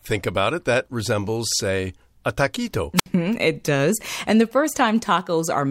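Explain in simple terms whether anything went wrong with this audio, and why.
A wireless microphone squelch dropout occurs from 2.96 to 3.06 s, right after "resembles say a taquito" and before "it does". The radio link between the microphone and its receiver weakened for a moment, so the receiver's squelch shut the output off rather than pass on static. You hear a short burst of hiss, then a gap of near silence lasting about 65 ms, and the speech comes back.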